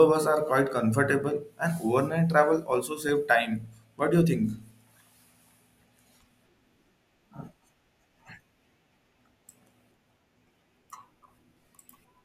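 DAB burbling appears twice in this speech. From 1.23 to 1.49 s, just after "bus are quite", bit errors have slipped past the error correction into the MP2 data, so corrupted samples put short noise blips into single sub-bands and, where they get through, corrupted scale factors make individual sub-bands jump in level for up to a frame. The error rate here is low, under a tenth of a percent. A second, very brief burble occurs at 3.09 s.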